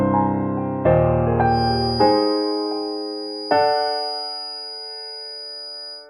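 From 1.44 s to the end of the music, a feedback whistle sits behind everything: a thin, steady tone at 4.9 kHz, around 10 dB below the music, its level slowly swelling and fading. The likely cause is a loudspeaker-to-microphone loop held just at the edge of feedback, sustaining one frequency without building up. On a spectrogram it shows as a single narrow horizontal line at 4.9 kHz; the waveform barely reveals it beneath the louder music.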